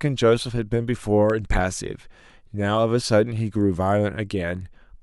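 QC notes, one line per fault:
1.30–1.32 s, loud pop: one sharp pop jumps out a few dB above the speech, which carries straight on underneath. It's a sudden voltage pulse sitting on top of the signal, likely from a plug, switch or static discharge, briefly shaped by the circuitry after it.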